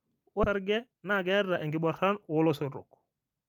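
At 0.43 to 0.45 s a skip ahead jumps over about 0.7 s of speech. The waveform splices the two sides of the jump with no silent gap, and the spectrogram shows an abrupt vertical seam.

From 0.59 to 2.63 s a jitter buffer speed-up trims pitch periods to shed around a third of a second. Speech runs at 115% with unchanged pitch, and the harmonics stay level while syllables look compressed.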